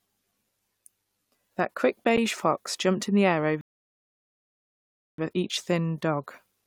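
Speech, with a block of digital silence at 2.17 s, just before "fox jumped in the": about 10 ms of samples drop to silence with no fade. It sounds like a tick, and a spectrogram shows a thin vertical gap, while the waveform shows a brief flat segment. From 3.61 to 5.18 s, right after "jumped in the air", a rebuffering stall occurs: playback ran dry of downloaded audio and paused until more arrived, then resumed exactly where it stopped. Nothing is lost, but about 1.57 s of silence is added, visible as a long flat line in the waveform and an empty band across the spectrogram.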